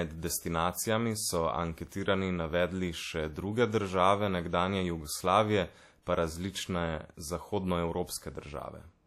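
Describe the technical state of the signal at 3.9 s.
At 3.9 s you're hearing the same WMA compression that runs through the whole clip. The speech has a ringing, washy edge and a hiss that breathes with it, with nothing above 15.8 kHz. That's likely a low-bitrate transform codec, fitting something like a 48 kbps stream, smearing quantisation noise.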